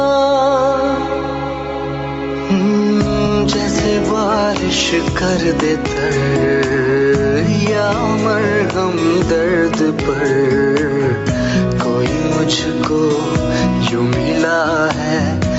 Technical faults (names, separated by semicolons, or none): gain pumping